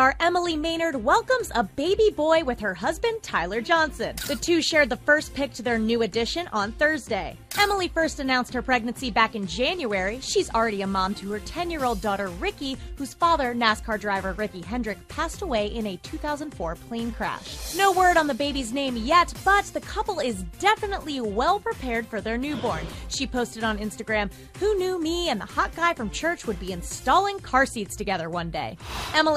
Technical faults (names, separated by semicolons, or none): none